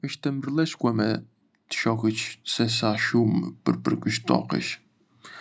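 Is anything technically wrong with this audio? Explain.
Yes. Automatic gain rising, from 0.22 to 1.29 s and again from 1.82 to 3.56 s: the gain control judged the speech too quiet and raised its gain by about 5 dB each time, so the voice and room noise swell together rather than staying steady.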